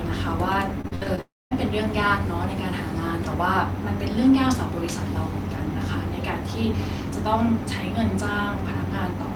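Repeated packet loss (robotic sound) from 0.81 to 1.19 s: five short gaps, up to 59 ms each, are patched by extending earlier sound, leaving choppy speech. From 1.21 to 1.53 s the speech stops, a brief fading fill gives way to about 220 ms of silence, and speech resumes with a piece missing, likely a long network dropout.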